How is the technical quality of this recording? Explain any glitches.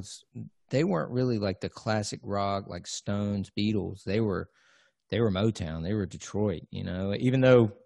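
No glitches or faults detected.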